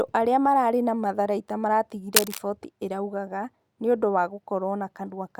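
From 2.14 to 2.39 s, just after "aria mararĩ na matharaita", cable scratch noise rasps over the speech at about the same loudness, likely from a worn connector or cable shifting its contact. The waveform shows dense, jagged spikes, and the spectrogram shows broadband, patchy vertical smearing.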